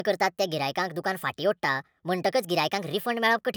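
From start to finish, the speech runs at the wrong sample rate. Everything is 1.38 times fast and 5.55 semitones high, which fits 32 kHz audio played at 44.1 kHz.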